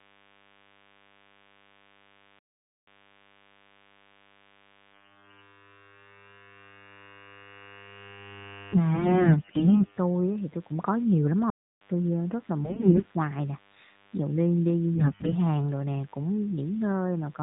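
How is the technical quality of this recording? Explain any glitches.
The recording has three kinds of technical fault: a constant buzz, two dropouts, and one burst of corruption. It comes through a narrowband mobile AMR codec at what sounds like 12.2 kbps, with only light coding damage.

DECT cordless phone buzz runs throughout. A nearby cordless handset or base sends a radio burst every 10 ms, and the audio circuitry rectifies it. This leaves a thin, steady 100 Hz buzz rich in harmonics, about 35 dB below the speech.

Playback stalls occur at 2.39 s for 0.48 s and at 11.50 s for 0.31 s. The likely cause is the player running out of buffered data or having its thread blocked. The speech cuts to silence mid-flow, then resumes.

AMR bit errors hit from 8.94 to 9.98 s. Over a weak link, the less-protected bits in the codec frames arrived flipped, at a high rate of around 15 percent, while the checksum still passed. 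Pulse positions and fine parameters go wrong, so the voice turns hoarse, scratchy and gargly while keeping its pitch and level.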